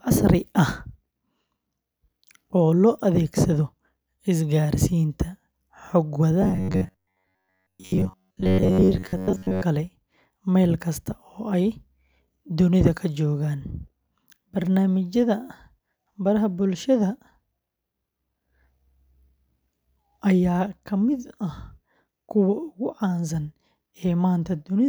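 From 6.42 s to 9.63 s the speech takes on a robotic sound from repeated short buffers: a rigid, metallic buzz at about 93.8 Hz that still loosely follows the speech. The likely cause is audio arriving too seldom, with playback filling the gaps by looping the most recent fragment. A buzz at that pitch points to a repeated segment of roughly 10.7 ms. Most of the stretch appears to be repeated material rather than new audio.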